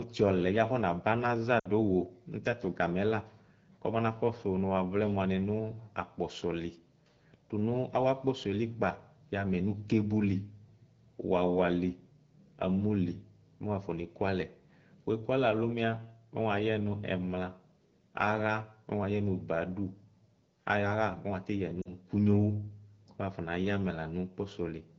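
Speech, carried over what sounds like AMR wideband at a clean rate, with lost AMR speech frames in two places: just after "ɔlɛbi abanaza" at 1.60 to 1.69 s, and again at 21.81 to 21.92 s. Radio errors corrupted those frames, so the decoder stretched the last good pitch and vocal tract settings with falling gain. You get a short drop to near silence each time, and the voice comes back a touch rough.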